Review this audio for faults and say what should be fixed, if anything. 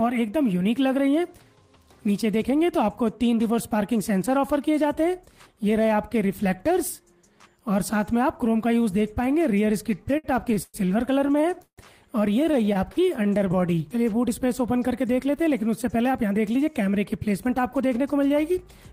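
Repeated stalls (stutter) occur in three bursts: 10.03 to 10.77 s (five gaps, longest 114 ms), 11.28 to 11.81 s (four gaps, longest 156 ms), and 12.44 to 13.56 s (twelve short gaps, none over 32 ms). Packets arrived late, the jitter buffer ran dry, and the receiver stretched the last sound until data resumed. Unlike packet loss, nothing is missing; the audio halts and drags rather than skipping. A larger or faster-adapting jitter buffer on the receiving side would absorb this late delivery.

A jitter buffer slow-down follows at 13.61 to 13.95 s, running at 89% speed and adding 47 ms. Repeated pitch periods rebuild the buffer's reserve, so sounds draw out at unchanged pitch. It differs from the stutter before it by being a smooth, continuous stretch with no halts. Keeping the buffer from draining in the first place, by fixing the late delivery, would remove the need for this refill.

A jitter buffer speed-up runs from 15.84 to 18.81 s at 107% speed, trimming roughly a fifth of a second as short pitch periods are cut to shed excess delay. 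The audio sounds hurried, yet pitch stays put, which separates it from a sample-rate mismatch, where pitch would rise too. Steadier packet timing would prevent the backlog this speed-up had to clear.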